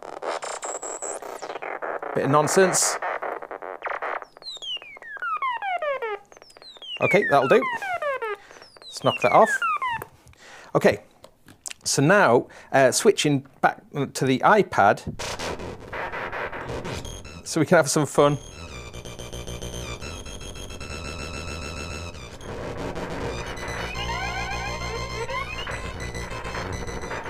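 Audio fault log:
No faults are audible; the signal stays continuous and stable throughout the clip.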